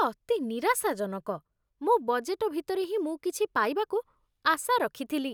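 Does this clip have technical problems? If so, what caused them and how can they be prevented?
No, there are no technical faults to point to in this speech clip. With nothing going wrong, there is no cause to trace and nothing that needs preventing.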